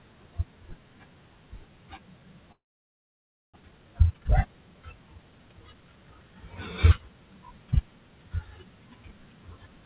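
A long network dropout runs from 2.52 to 3.58 s. The audio stops, the last sound carries on briefly as a fading buzz, and then roughly 0.95 s of near-silence follows. When the sound returns, about 0.6 s of material is gone. The likely cause is a stretch where no packets reached the receiver, which then filled the gap itself and came out around 400 ms further behind than before.

A jitter buffer speed-up follows from 3.61 to 5.75 s. Having built up that extra backlog, the receiver trims it by repeatedly cutting out tiny slices, each a pitch period or so long. The speech plays at about 119% speed with its pitch unchanged, so it sounds hurried, and roughly 0.4 s is removed in total. Throughout, the call path keeps nothing above 4 kHz, which fits a 64 kbps G.711 mu-law link.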